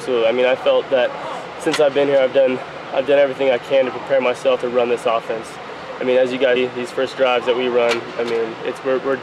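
Whole compressed frames are skipped four times: the decoder never plays a short run of frames, either missing from the file or rejected as damaged, so the audio lurches forward. At 1.21 s about 70 ms is lost, at 2.61 s about 100 ms, at 6.55 s roughly a third of a second, and at 8.18 s about 50 ms.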